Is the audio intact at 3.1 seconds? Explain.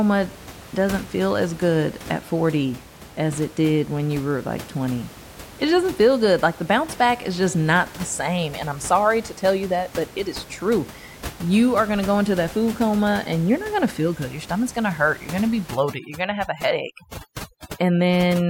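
Yes, the audio is intact at 3.1 seconds, with only the room's own background noise sitting about 18 dB below the speech.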